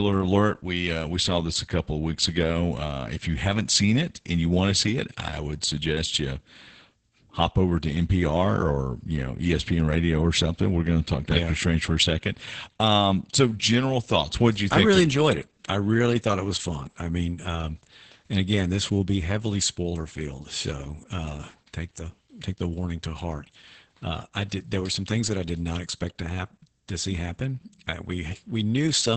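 From start to end the speech carries heavy Opus voice compression. The band stops at about 8.7 kHz, which points to the SILK linear-prediction coder in wideband mode, and the coarse coding of the excitation fits a rate of around 10 kbps in 20 ms frames. The speech sounds muffled, with the air and sibilant detail above that cut-off missing, while the voicing takes on a hoarse, robotic texture throughout.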